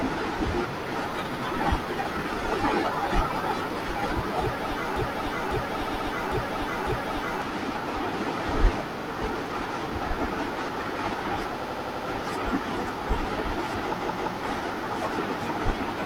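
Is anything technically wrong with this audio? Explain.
Yes, there are three kinds of fault.

Repeated frames: a run of compressed frames was stored or transmitted more than once, so the decoder plays the same slice again and the audio gets longer. This occurs at 1.30–1.39 s (an 85 ms block played once more), 5.82–6.08 s (128 ms, two extra plays), 8.98–9.03 s (43 ms, once), 11.58–12.01 s (85 ms, five extra plays) and 13.97–14.32 s (171 ms, two extra plays). Each is heard as a stutter.

Broken-record loop: from 4.96 to 7.42 s the stream most likely stalled and kept sending the last fragment it held. A 550 ms piece repeats exactly, back to back, four times, and the speech that should have played in that span is lost. The result is a mechanical, stuck-sounding cycle of over two seconds.

Loud pop: at 9.46–9.48 s a sudden voltage step or pulse, likely from a switch, static discharge or a driver glitch, is added to the signal. 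It is a single sharp pop peaking about 5 dB above the speech, which carries on underneath it.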